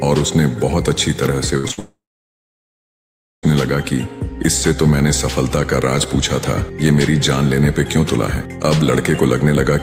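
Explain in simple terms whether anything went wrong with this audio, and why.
Something did go wrong, all in a cluster starting at about 1.57 s.

First comes a burst of packet loss from 1.57 to 1.66 s, and another from 1.71 to 1.79 s. Each time about 60 ms of audio didn't arrive in time. The receiver kept the last bit of sound going and faded it, so you hear a short buzz or hiss, then the audio picks up slightly further along.

Squeezed between those, from 1.68 to 1.71 s, there's a short concealed packet loss. About 20 ms went missing, and the gap was patched so smoothly that it's just a quick smear or wobble rather than an obvious hole.

Then, from 1.79 to 3.45 s, you get what's likely a long network dropout. The filled-in sound fades out fast and leaves roughly a second and a half of silence. When the audio returns, over 1.6 s of it is simply gone.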